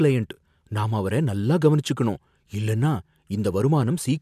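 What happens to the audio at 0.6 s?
Nothing goes wrong at 0.6 s; the speech carries on intact through that moment with no audible fault.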